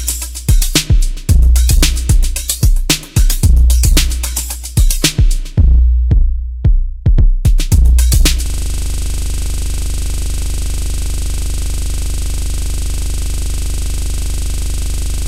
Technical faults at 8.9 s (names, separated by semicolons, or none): hard clipping; system hang loop